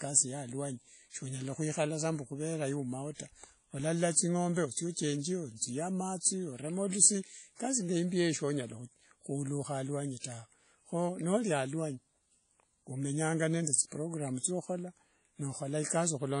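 Throughout the speech, the sound has a ringing, washy quality with a hiss that swells and recedes with each syllable, and nothing is present above about 10.1 kHz. The likely cause is WMA compression at a rate that fits roughly 32 kbps. Its long transform blocks smear quantisation noise over tens of milliseconds, and faint spectral lines drop out. What separates it from broadband noise reduction is that the hiss tracks the signal instead of pumping in the gaps.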